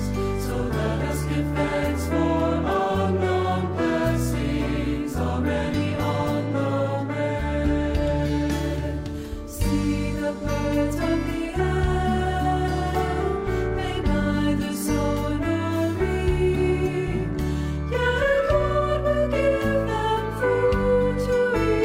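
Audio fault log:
No faults detected in this audio.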